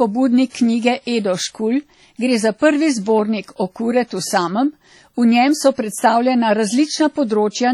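Speech carries heavy WMA compression damage throughout, likely from a low-bitrate transform encode around 32 kbps: washy, ringing tone with breathing hiss, nothing above 19.3 kHz, unlike broadband noise. Pre-echo appears from 0.49 to 0.55 s, about 53 ms of hiss leading a sharp attack rather than trailing it, which separates it from reverb or ringing.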